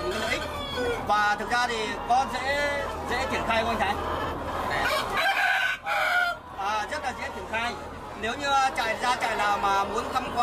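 No technical faults can be heard in this clip.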